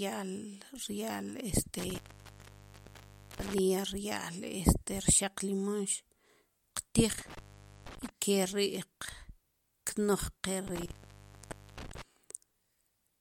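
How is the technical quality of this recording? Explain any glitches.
The speech recording is disrupted three times by intermittent contact. The line opens between 1.79 and 3.59 s (about 1.4 s open), between 7.11 and 8.09 s (about 0.48 s), and between 10.67 and 12.02 s (about 0.87 s). A loose plug or cable briefly loses connection, so the signal drops out or breaks up, with crackle where contact breaks and returns. On a waveform each episode shows as a collapsed or ragged stretch, and on a spectrogram the speech bands vanish or fragment, bracketed by thin vertical broadband streaks from the crackle.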